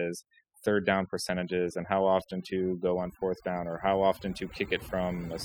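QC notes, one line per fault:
Throughout: overdone noise removal. The noise reduction was pushed too hard, so individual frequency bands near the estimated noise floor are cut deeply or shut off, taking quiet speech detail with them. The background drops and breaks up into twinkling specks. A spectrogram shows scattered isolated blips between words and ragged, hollowed-out harmonics.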